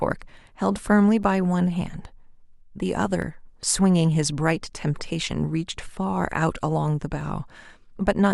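Brief clicks or tiny skips break the speech at 1.23 s, 3.22 s and 7.21 s. Each is an overlap between stream segments: overlapping timestamps made the player trim roughly 10 ms of real audio, so the waveform jumps. The spacing fits 2-second segments.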